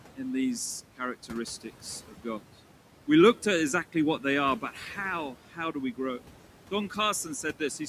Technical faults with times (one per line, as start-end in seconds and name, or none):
0.00-7.88 noise suppressor artifacts
2.08-2.41 speech cut by the noise suppressor
5.51-5.75 speech cut by the noise suppressor